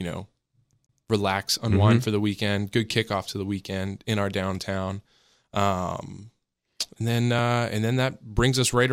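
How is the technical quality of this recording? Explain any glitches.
The recording has one glitch near the start.

CD stuck on one turn, from 0.73 to 1.00 s: a scratch keeps throwing the laser back one track, so the same 0.14 s slice of speech plays twice in a row, each repeat split by a brief mute, giving a quick, even stutter.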